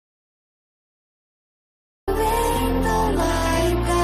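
The input feed was likely cut off at the source while the recorder kept writing silence. This audio dropout to silence is already under way at the start and runs to 2.08 s: total silence with no room tone, then sound resumes abruptly mid-flow.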